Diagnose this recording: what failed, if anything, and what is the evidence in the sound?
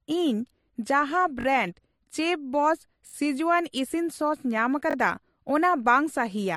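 The speech has two different kinds of compression grit layered on each other throughout and nothing above 12.1 kHz. That points to the codec stage, most likely transcoding between lossy codecs: an AAC-style encode at a low bitrate, then a second MP3 encode at a similarly low rate. The MP3 pass spends its bits re-encoding the first codec's artefacts and adds its own, and the lower cut-off survives the chain.

Three brief stutters, at 1.41–1.45 s, 3.07–3.14 s and 4.91–4.95 s, sound like a tiny fragment hammered out in quick succession. Each repeat lasts about 21 ms, which fits a 1024-sample buffer. The fragment plays three times at the first and last events and four times at the middle one. This is a repeated buffer at the driver or buffer stage: new audio arrived late, so the device replayed its last buffer, with a hard join at each repeat.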